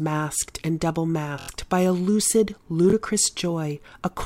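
At 1.39 to 1.49 s a 23 ms chunk loops four extra times, a repeated buffer stutter (fits a 1024-sample buffer) when audio arrived late; 2.90 to 2.93 s repeats once, a short stutter.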